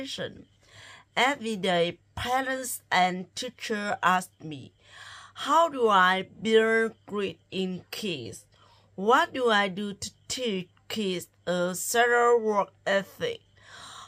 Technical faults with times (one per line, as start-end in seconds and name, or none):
none